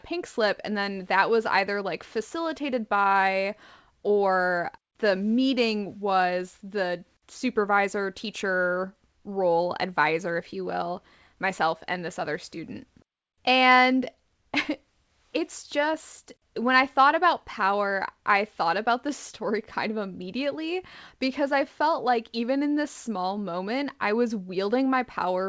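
Nothing stood out on listening to this speech, which comes through a call path whose wideband codec leaves nothing above 8 kHz.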